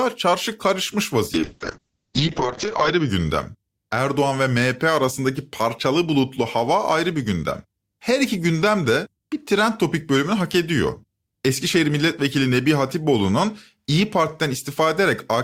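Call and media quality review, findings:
Call bitrate drop, 1.35 to 3.15 s: speech goes rough and muffled, top end cut from 20 kHz to 8 kHz. Encoder starved after a bandwidth-estimate dip, fits roughly 64 down to 6 kbps, bottoming out about 1.55 s before recovering.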